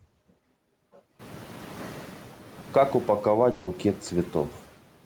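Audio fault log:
Throughout, noise suppressor artifacts: the processing pulls the background down by about 11 dB wherever it judges the noise to be steady, frame by frame, so the room sound dips in the gaps and swells back up under the speech. The room noise rises by about 14 dB, roughly a second in.
3.51 to 3.69 s, long network dropout, likely: for about 160 ms the speech gives way to a synthetic continuation, the last sound smeared on as a fading buzz or hiss rather than real audio, with no fully silent gap. When the signal resumes at 3.69 s it picks up further along, so that stretch of speech is simply gone. That pattern of concealment followed by a skip points to a run of packets that never arrived.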